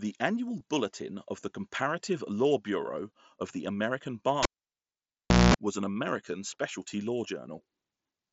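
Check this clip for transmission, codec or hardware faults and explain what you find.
Two faults stand out, one brief dropout and one cable interruption. The speech passes through a Bluetooth mSBC headset link, with its light grain on louder sounds.

At 0.60 s there is concealed Bluetooth headset packet loss. About 7.5 ms of audio went missing between headset and phone, which fits a single lost frame. The receiver filled the gap by repeating a matching stretch of recent waveform. It is nearly hidden.

From 4.43 to 5.54 s the cable is pulled and plugged in. A pop opens a near-silent gap of about 1.07 s. At one point only the plug's tip touches. That lets in about 0.22 s of 60 Hz mains buzz, then a second pop as the sound returns.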